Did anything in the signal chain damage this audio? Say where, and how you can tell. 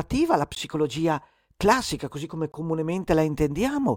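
Yes, at the driver or buffer stage. A block of digital silence cuts the speech at 0.55 s for 15 ms, and again at 2.52 s for 20 ms. Each gap starts and stops with no fade. The output buffer went unfilled, leaving zeros.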